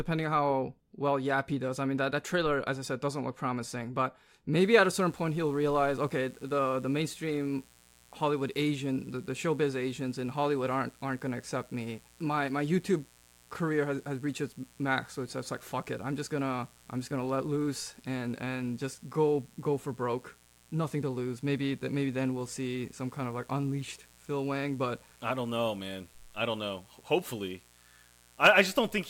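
From 4.58 s to the end, a steady, raspy mains buzz sits roughly 30 dB under the speech. Sharp switching spikes, twice per 60 Hz cycle, add a stack of 60 Hz harmonics, so it rasps rather than droning like a smooth, low hum.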